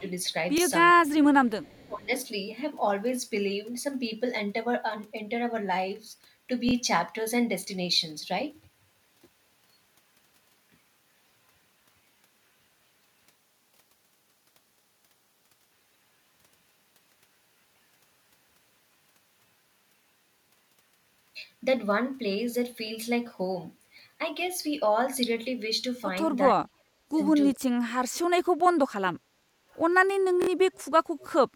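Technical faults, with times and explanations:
0.00–0.04 s, 1.47–1.86 s, 29.72–29.79 s and 30.73–31.28 s: echo leak. A faint delayed copy of the speech trails about 0.4 s behind, roughly 40 dB down in the first and third spots, about 35 dB at 1.5 s and about 30 dB at the end. The likely cause is a speakerphone whose echo canceller let some of its microphone pickup through and return it.
0.58–0.60 s, 6.69–6.73 s, 22.87–22.90 s and 30.42–30.49 s: repeated buffer. Each is a brief stutter of a 23 ms slice played again with a hard join: once at 0.58 s and 22.87 s, twice at 6.69 s, three times at 30.42 s. New audio arrived late, so the device replayed the last block, which fits a 1024-sample buffer.
0.94–1.07 s, 1.62–2.10 s and 26.57–27.59 s: speech suppressed in double talk. The speech dips by about 15 dB, then about 20 dB, and at 26.6 s by as much as about 40 dB, nearly cutting out in pieces. 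This likely happened because both sides talked at once, and the echo canceller muted the talker along with the echo.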